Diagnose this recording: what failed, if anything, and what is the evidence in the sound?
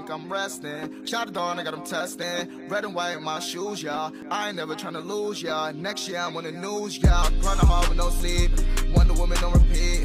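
Tiny forward skips land at 2.23 to 2.27 s, 4.22 to 4.26 s and 8.20 to 8.23 s, each removing about 20 to 40 ms. This is overlap between stream segments at the playback stage. Two neighbouring segments claim the same stretch of time, so the player trims the overlap away from sound that was never actually duplicated. The waveform jumps at each join, and the spacing on multiples of 2 s fits 2-second segments.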